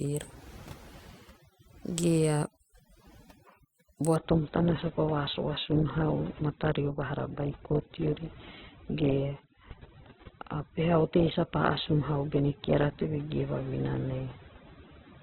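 From the start, overdone noise removal is audible: the suppressor pulls bands near its noise estimate almost to nothing, leaving a near-silent background flecked with twinkling specks, while quieter parts of the speech are stripped away. At 4.16 s an adaptive stream switches to a lower bitrate with no gap and holds it to the end. The change points to a drop from around 64 kbit/s Opus to about 8 kbit/s, and nothing is left above 4 kHz, so the treble vanishes abruptly and codec artefacts rise.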